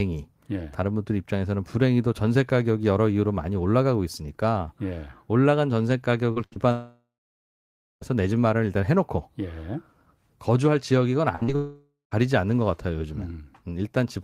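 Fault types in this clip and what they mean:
Burst of packet loss: Three times, at 6.31–6.38 s, 6.46–6.54 s and 11.35–11.43 s, the speech stops moving forward for 65 to 80 ms. The receiver stretches the last sound into a held buzz or hiss that dims, and speech resumes later, with about 40, 60 and 60 ms missing. It is longer and more audibly frozen than a short concealed loss, but recovers within a tenth of a second, never reaching silence.
Short concealed packet loss: Two brief patches, at 6.54–6.58 s and 11.43–11.50 s, directly after bursts, where the receiver patches a hole of about 20 and 40 ms by extending the previous sound's pitch or noise and blending back in. They sound like a quick smear or wobble rather than a held tone, short enough that only a consonant-sized piece of the speech goes missing, which separates them from the longer bursts.
Long network dropout: At 6.72–8.03 s the speech fades into a dying buzz or hiss and then about 0.9 s of silence before returning, with roughly 1.3 s lost. 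At 11.56–12.13 s a shorter version loses about 0.56 s, with around 0.14 s of silence. The likely cause is audio ceasing to arrive altogether. Unlike the bursts, the concealment runs out and real silence follows, and the gaps cluster after the bursts.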